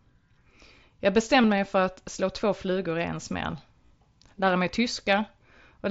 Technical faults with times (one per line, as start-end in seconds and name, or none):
1.42 concealed Bluetooth headset packet loss